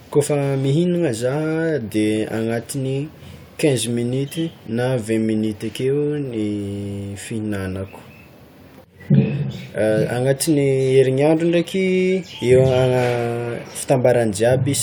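Nothing stood out on listening to this speech recording.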